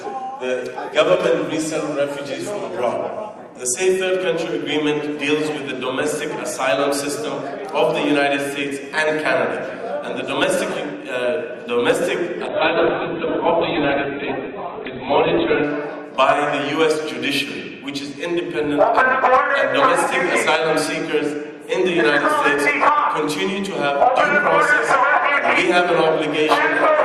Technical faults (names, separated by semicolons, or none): call bitrate drop